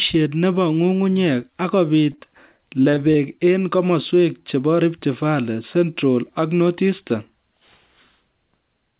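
This is a speech clip carried over a narrowband call path, with nothing above 4 kHz, which fits a G.711 codec. Two short concealed packet losses sit back to back, from 2.12 to 2.16 s and from 2.16 to 2.19 s. About 20 ms of audio is missing in each. The receiver patched each hole by extending the preceding sound, then blended back. It is heard as a quick smear or wobble. Repeated packet loss, giving a robotic sound, runs from 2.57 to 3.16 s, just before "eng kemoswek chebo". Five gaps fall in that stretch, about 100 ms missing in all, the longest 21 ms. Concealment covers about 16 percent of the span. Each gap is filled by continuing the last sound before the next gap arrives. The speech turns choppy, with pieces missing.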